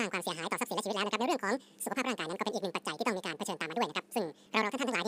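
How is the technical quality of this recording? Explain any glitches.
Poor: the speech is audio read two samples at a time (double speed) throughout. The reader treats sample pairs as single frames, so playback runs 2x fast and 12 semitones higher.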